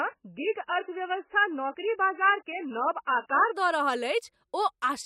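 Speech, and from 0 to 3.56 s it has the signature of an adaptive stream starting at a low bitrate: nothing above 3 kHz, heavy codec smearing, consistent with roughly 10 kbit/s MP3. At 3.56 s the player switches to a far higher rendition, around 128 kbit/s, and full bandwidth returns abruptly without a gap.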